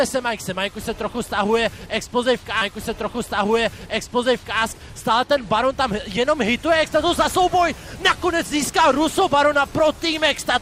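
At 2.61 s a stream segment is repeated. The player queued the same chunk twice, so a full two seconds of audio, running to 4.61 s, plays again, with a small blip at the jump back. This differs from a short buffer stutter or loop glitch, where a few milliseconds repeat as a rapid buzz. Here an entire recognisable stretch returns intact, and the timeline is pushed back by two seconds.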